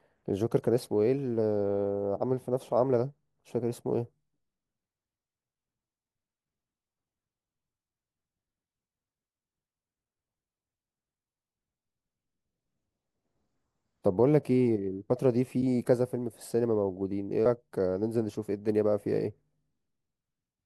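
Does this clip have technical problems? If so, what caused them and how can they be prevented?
Yes. At 17.46 s there is damaged data in a compressed stream: corrupted data left the decoder unable to parse that frame, so it lost sync and jumped to the next valid header. Checksummed transfer and storage with error detection, plus re-fetching or discarding damaged frames before decoding, would prevent it.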